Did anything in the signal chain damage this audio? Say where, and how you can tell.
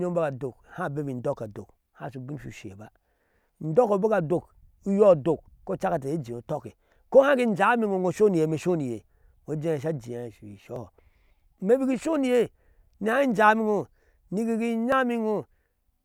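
Yes, at the driver or buffer stage. At 10.76 s and again at 14.92 s the speech jumps abruptly, with no gap of silence. The first skip loses roughly 10 ms and the second about twice that. This is likely a dropped buffer (overrun): the capture software failed to collect a block before the hardware overwrote it, so the audio on either side of the missing block is spliced directly together.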